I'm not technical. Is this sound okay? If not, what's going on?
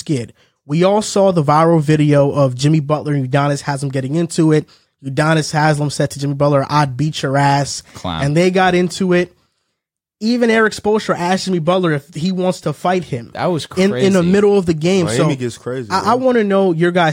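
Yes, no faults heard.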